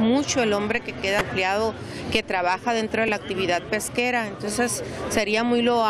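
The audio has two bursts of damaged data in a compressed stream: a short burst from 1.18 to 1.21 s and a brief blip at 3.08 s. Corrupted bytes in the encoded stream made the decoder misread those frames and lose sync until it found a valid frame header again. Unlike a plain dropout or a single click from a sample error, each event comes from the decoder misreading corrupted frames.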